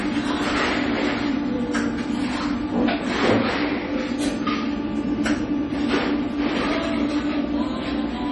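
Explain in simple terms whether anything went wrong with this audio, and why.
Yes: the whole clip has a watery, swirly quality and dull top end, with nothing above about 11.3 kHz, likely from heavy MP3 compression. Unlike plain muffling, faint details flicker in and out.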